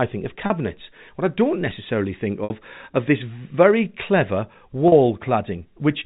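Three brief dropouts are patched by packet loss with pitch repetition. They fall at 0.46 to 0.50 s after "think of", at 2.44 to 2.50 s between "I don't necessarily think" and "of this very clever", and at 4.88 to 4.92 s. Each gap lasts 40 to 60 ms, and the receiver loops the last pitch period to fill it, so you hear a short buzzy hold inside the narrow G.711 telephone band.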